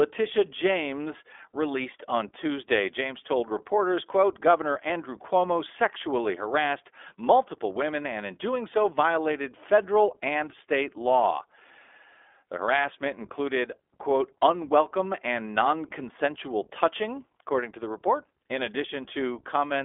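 iLBC codec damage runs through the whole speech clip: the audio is squeezed into a telephone band of roughly 300 Hz to 3.5 kHz with nothing above 3.7 kHz, and each 20 ms frame is coded on its own, leaving a plainly rough, synthetic texture, which fits the 15.2 kbps mode.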